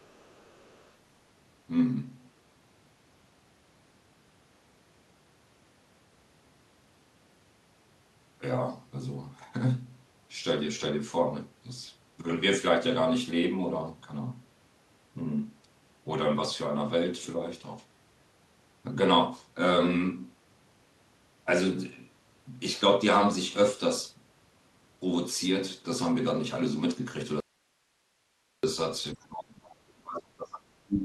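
From the start to 0.92 s, a second voice sits faintly under the speech, far below it, roughly 35 dB down. This is the other side's voice leaking through: the far-end audio played on the loudspeaker was likely picked up by the microphone and not fully removed by the echo canceller.

At 27.40 s the speech cuts off abruptly and returns at 28.63 s, leaving about 1.2 s of nothing but faint hiss, roughly 45 dB below the normal level. This audio dropout to a faint residue likely means the signal was lost while the path after the break stayed live.

From 29.14 to 30.69 s, and again from 30.85 s to the end, the speech dips sharply. The deepest drop is about 35 dB in the first stretch and about 25 dB in the second. This is speech suppressed in double talk: with both sides likely talking at once, the echo canceller turned everything down.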